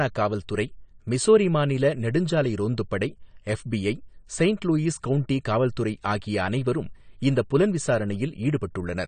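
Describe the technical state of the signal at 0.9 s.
At 0.9 s the speech carries AAC compression damage, present throughout the clip: nothing reaches above 9 kHz, and sibilants sound smeared and fizzy. This is likely low-bitrate AAC-LC quantising its spectral lines coarsely, which fits roughly 32 kbps.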